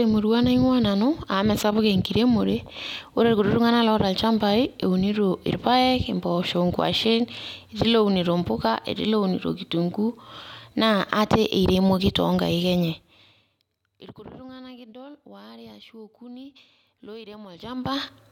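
The speech comes through with its level, timing and tonal balance intact, and no technical problem can be heard anywhere in the recording.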